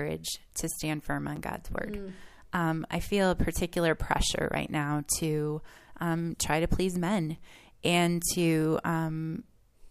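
Speech here, with a gap between chunks: tiny hard-edged holes of about 7 ms at 1.36, 4.37 and 7.38 s, exactly every 3 s, where the chunk joins left silence.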